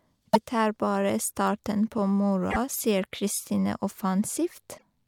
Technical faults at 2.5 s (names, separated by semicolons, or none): damaged data in a compressed stream